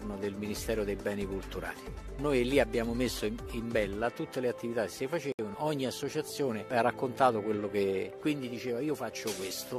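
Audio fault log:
5.32 to 5.39 s, gap at a join of encoded pieces: the sound drops out for about 67 ms and then picks up right where it left off. Two separately encoded chunks were butted together untrimmed, so encoder start delay and last-frame padding sit in the middle, with soft, smeared edges.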